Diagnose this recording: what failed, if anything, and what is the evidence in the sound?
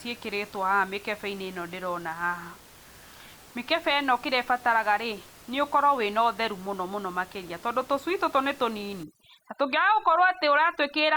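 From about 9.03 s to the end at 11.16 s, overdone noise removal in the call processing kicks in. The room noise, sitting about 25 dB under the speech, gets gated band by band into near silence with twinkling specks.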